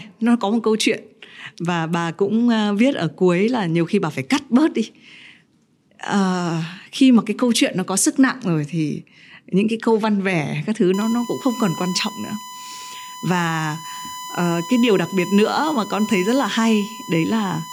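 From 10.94 s to the end at 17.73 s, a USB whine sits under the speech: a steady 1 kHz tone roughly 15 dB below it, from 1 ms USB frame current leaking in through the power or ground. Unlike mains hum, its pitch is high and unrelated to 50 or 60 Hz.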